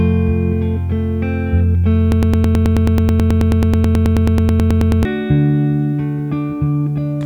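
A broken-record loop runs from 2.12 to 5.05 s: a 108 ms fragment repeats exactly, back to back, 27 times, giving a rapid stutter. The likely cause is a stalled player or stream resending its last held fragment, so the intended audio there is lost.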